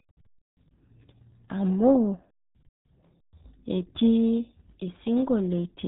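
Throughout, the RealAudio 14.4 codec's heavy damage muffles and garbles the speech. Nothing passes above 3.8 kHz. The sound fits an 8 kbit/s dial-up stream.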